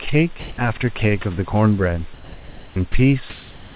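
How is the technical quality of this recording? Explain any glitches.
The recording has two recurring glitches, both tied to the call's silence handling, heard over a narrowband line with nothing above 4 kHz, which fits a G.711 codec at 64 kbps.

Sound dropped by the voice detector occurs from 0.40 to 0.58 s and briefly at 2.92 to 2.94 s. The sender's voice detector likely judged quiet speech to be background and stopped sending. For 180 ms at the first point, about 80 ms of speech gives way to steady hiss before the voice returns. At 2.92 s, a 20 ms sliver vanishes into noise.

Comfort noise in place of the background fills the pauses from 2.14 to 2.76 s and from 3.30 s to the end. Likely, when no speech is detected, transmission pauses, and the receiver plays synthetic noise shaped roughly like the room. The real background, about 24 dB and 22 dB below the loudest speech in the two pauses, is swapped for a smooth, featureless hiss. 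That hiss differs in level by about 6 dB in the first pause and about 5 dB in the second, so the room changes and flattens.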